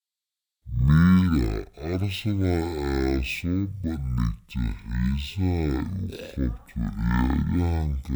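A speech recording with a stereo-read-as-mono fault for its whole length: left and right samples are taken in turn as one channel, so each stereo frame becomes two mono samples. The speech plays at half speed (0.5×) and an octave (12 semitones) low. Unlike a plain sample-rate mismatch, which also slows and lowers the audio, this fault leaves a fainter mirrored copy of the sound in the upper half of the spectrum.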